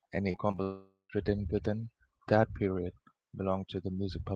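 A speech recording carried over an Opus call path. From 0.31 to 0.60 s, repeated packet loss (robotic sound): five short gaps, none longer than 27 ms, were patched by extending the previous audio, so over a third of that stretch sounds choppy. From 0.62 to 1.11 s, a long network dropout is the likely cause: the last sound stretches into a fading buzz or hiss, then about 150 ms of silence, before the audio resumes at "written within that period" with that half second lost.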